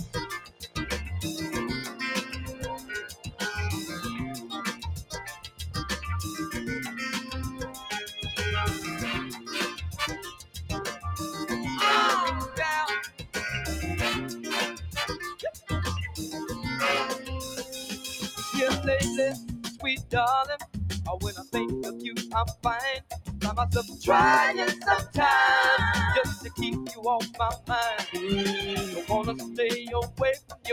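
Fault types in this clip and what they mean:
noise suppressor applied to music or sounds: a speech-tuned suppressor stayed active and treats sustained material as noise, so level swings by about 10 dB and the sound pumps and thins.
sound cut by the noise suppressor: the suppressor misjudged stretches as noise and pulled them down by up to about 16 dB, sinking held tones and clipping decays across the clip.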